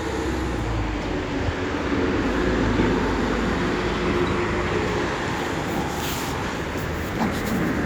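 No technical faults can be heard anywhere in this audio.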